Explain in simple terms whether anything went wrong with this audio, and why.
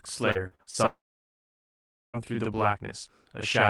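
Channel delay (doubling) runs through the whole clip. One stereo channel arrives 40 ms after the other, and when both are mixed into one, the late copy sits right behind the original at the same loudness. The speech sounds doubled, with a slap.

Repeated packet loss (robotic sound) occurs from 0.31 to 0.77 s. The audio is punched with a series of short holes, the longest 39 ms. Each hole is patched by stretching the last bit of sound, so about 41% of that stretch is filler. The result sounds choppy and robotic.

A long network dropout follows from 0.86 to 2.17 s. The sound turns into a brief fading buzz or hiss, then about 1.2 s of silence. The likely cause is that audio stopped arriving, so that part is gone and the speech resumes after it.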